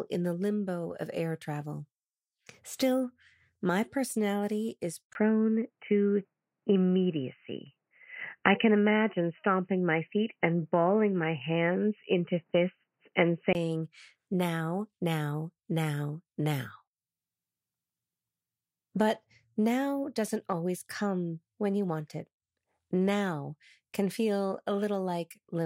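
The input likely switched to a poorer device from 5.13 to 13.55 s, after "my personality is": a brief gap, then dull sound with nothing above 3 kHz.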